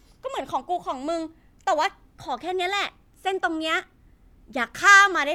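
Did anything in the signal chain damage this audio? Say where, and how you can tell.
No, nothing in the signal chain has damaged this speech recording: there are no dropouts, clipping, glitches or other faults to trace to any stage.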